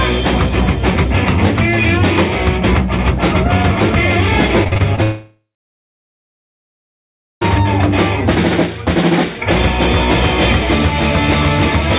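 From 4.64 to 4.99 s, repeated packet loss leaves five patched holes, the longest 42 ms, sounding choppy and robotic, with repeated, smeared blocks on the spectrogram. At 5.03 s a brief fading buzz gives way to about 2 s of silence and a flat waveform until 7.43 s, likely a long network dropout.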